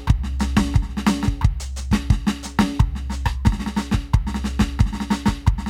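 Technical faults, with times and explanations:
No technical faults are audible in this music recording; the signal holds steady with no dropouts, distortion or level disturbances at any point.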